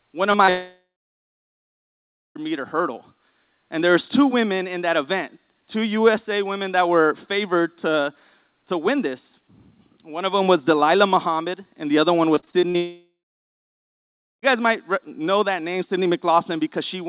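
At 0.32 to 0.36 s and again at 0.46 to 0.49 s there are brief smears, each a few hundredths of a second long. These are short concealed packet losses: about 20 ms of audio arrived too late each time, and the receiver bridged the hole by extending the preceding sound before blending back.

Straight after, from 0.49 to 2.37 s, a fading buzz gives way to about 1.5 s of near-silence before the audio resumes at "meter hurdle". This is likely a long network dropout. Nearly 1.9 s never arrived, and the concealment faded out while the lost stretch was simply skipped.

Following "and the other one", from 12.35 to 12.76 s, the sound turns choppy, with pieces missing. This is repeated packet loss: six separate gaps, the longest 40 ms, were each patched by extending the last sound, so patched audio makes up about 37% of that stretch.

That choppy passage runs directly into a second long network dropout, from 12.76 to 14.44 s. 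A fading tail leads into about 1.3 s of near-silence, and the audio returns at "guys might know that". The likely cause is roughly 1.7 s of audio that never reached the receiver.

Throughout, the telephone-band sound with nothing above 4 kHz fits a G.711 A-law call path.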